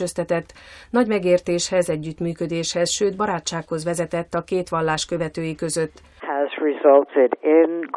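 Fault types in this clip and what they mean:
No audible faults detected.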